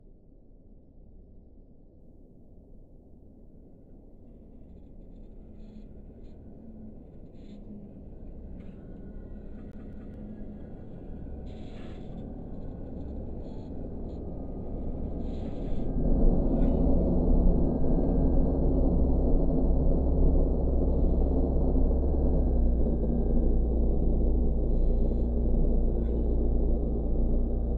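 From 0 to 2.0 s the adaptive stream starts at a low bitrate: the sound is dull and smeared, with nothing above 1.5 kHz, so the spectrogram is dark overhead until the content abruptly fills in. That fits a step from roughly 24 to 128 kbit/s MP3. At 9.72 to 10.14 s the CD sticks on one turn, and a 0.21 s slice plays twice with a brief mute at each jump. The waveform shows identical repeated blocks split by tiny flat gaps.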